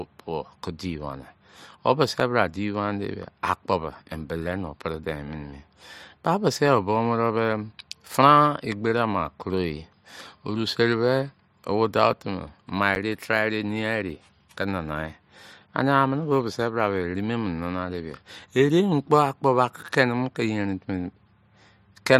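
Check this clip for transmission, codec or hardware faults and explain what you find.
Two brief blocks of digital silence occur in the speech. At 2.2 s and 12.95 s the audio drops abruptly for 5 ms and 10 ms, heard as ticks, from zero-filled output due to missed buffer deadlines or invalid calculations.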